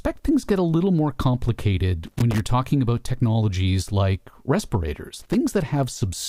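At 2.04 to 2.40 s, just before "talking about technologies like", and again at 5.17 to 5.34 s, loose connector crackle chops the speech into irregular scratchy bursts. The bad contact breaks and remakes, leaving jagged waveform dropouts and vertical broadband streaks on a spectrogram.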